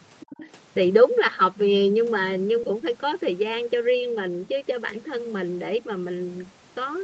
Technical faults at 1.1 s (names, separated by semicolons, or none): none